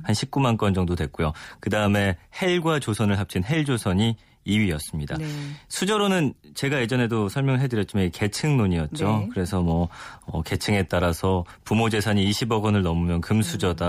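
No technical faults turn up anywhere in this speech recording, so there's nothing to flag from one end of it to the other.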